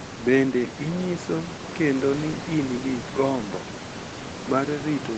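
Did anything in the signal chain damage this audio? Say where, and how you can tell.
No, nothing in the signal chain damaged this speech.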